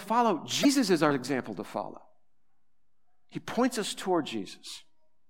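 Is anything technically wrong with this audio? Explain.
Yes. From 0.61 to 0.65 s there is damaged data in the compressed stream: corrupted bytes make the decoder misread those frames and lose sync until it finds the next frame header. In this speech clip that produces a brief glitch, heard as a chirp, squawk, click or short hole.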